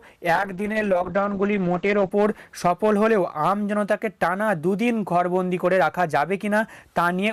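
From 0.39 to 2.21 s, a call bitrate drop starves the encoder, so everything above 8 kHz vanishes and the sound turns muffled and rough.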